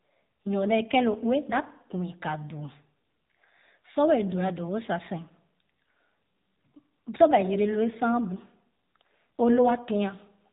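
From start to end the speech carries AMR narrowband mobile codec damage: nothing passes above about 3.8 kHz, and the voice turns plainly buzzy and synthetic, pointing to a low mode near 7.4 kbps. Unlike a plain low-pass filter, the damage comes from the codec's vocal-tract model rebuilding each frame.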